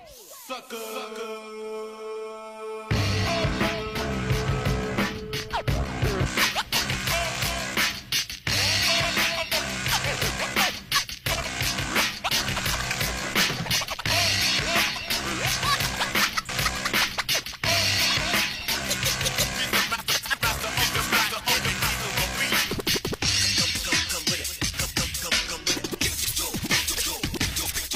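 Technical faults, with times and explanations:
6.26 s to the end, pre-emphasis left on: from here the treble jumps up, about 11 dB hotter at 10 kHz than at 1 kHz, which fits a J.17-style boost whose matching de-emphasis never got applied. So everything turns thin, bright and hissy on sibilant edges.
16.45 to 16.50 s, stream segment skipped: the audio abruptly jumps ahead with a small blip at the join, so a chunk of the programme just isn't there. The likely cause is a segment that failed to load, with the player carrying straight on to the next one.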